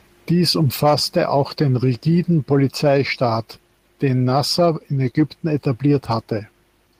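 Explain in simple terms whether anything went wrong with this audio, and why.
Nothing went wrong here; the speech comes across steady and intact the whole way, with no glitches, gaps or odd sounds to point to.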